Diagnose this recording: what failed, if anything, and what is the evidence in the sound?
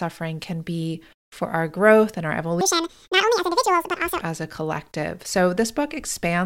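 Audio read two samples at a time, 2.61 to 4.21 s, after "our growth and our": sample-format conversion took sample pairs as single frames, giving double speed, an octave up.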